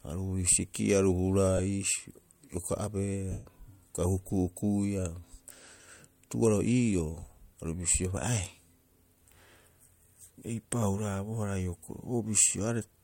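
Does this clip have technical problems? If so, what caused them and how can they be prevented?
Yes. Lost LE Audio frames cause dropouts at 1.57–1.59 s, 3.31–3.46 s and 10.38–10.42 s, covering about 15, 142.5 and 30 ms of speech, which fits runs of 7.5 ms LC3 frames going missing over the Bluetooth link. During each gap the decoder fills in by repeating the last spectrum with scrambled phase. That turns voiced sound into a brief noisy smear, and in the long 3.31 s gap the smear fades audibly toward silence before the signal returns. The light codec compression underneath shows no fault of its own. To prevent the dropouts, keep the transmitter close with a clear line of sight, reduce 2.4 GHz interference, and allow retransmissions or a larger presentation delay in the LE Audio stream setup.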